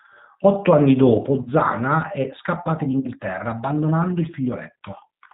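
Throughout, the speech sounds slightly rough and synthetic, with a dull top end where nothing above 4 kHz comes through. This is the G.729 codec working at 8 kbit/s. It does not carry the waveform itself. Instead it rebuilds each 10 ms frame from a vocal tract filter, a pitch predictor and a handful of pulses. The coarse pulse pattern produces the plainly audible graininess.

At 1.43 to 1.48 s and again at 3.00 to 3.08 s, the speech smears into a short buzzy tone or coloured noise that fades before it recovers. This is VoIP packet loss concealed by the speech codec. Each gap is consistent with about 30 ms of lost audio, one packet's worth. The decoder filled the hole by repeating its last pitch and filter settings at falling gain. Because every frame builds on the previous one, the sound stays weak briefly after the stream resumes.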